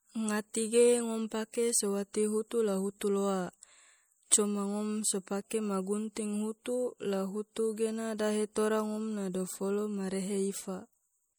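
MP3 compression damage runs through the whole speech clip, from start to finish, and it is plainly audible. The sound fits a low-bitrate MP3 encode, likely around 64 kbps. With so few bits, the encoder discards quiet frequency detail. That detail then flickers in and out from frame to frame. The result is watery speech with swirling sibilants and softened consonant onsets.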